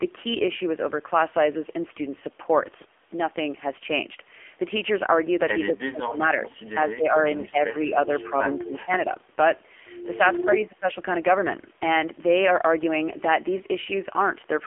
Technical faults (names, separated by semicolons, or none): AMR narrowband mobile codec; speech suppressed in double talk